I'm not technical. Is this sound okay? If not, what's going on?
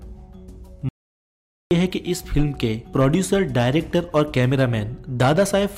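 No. The audio input was likely lost for a moment, perhaps through a loose connection or an accidental mute, while recording carried on. This audio dropout to silence runs from 0.89 to 1.71 seconds: the sound cuts out completely for about 0.8 seconds, then returns mid-flow.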